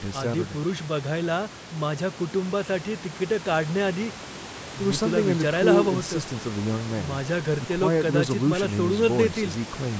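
No technical faults occur anywhere in this speech recording.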